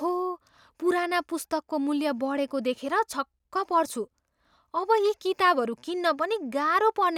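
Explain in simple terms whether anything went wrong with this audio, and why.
Nothing went wrong with this speech recording: the signal holds steady throughout, with no technical faults to be heard.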